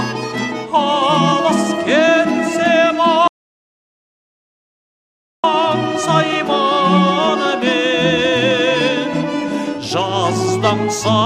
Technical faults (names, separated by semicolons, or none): audio dropout to silence